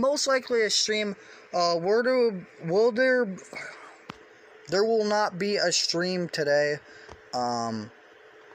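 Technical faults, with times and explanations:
No technical faults can be heard anywhere in the clip. There is nothing here that needs a time or an explanation.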